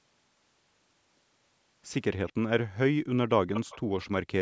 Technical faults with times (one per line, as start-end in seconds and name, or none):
2.27-2.33 echo leak
3.53-4.08 echo leak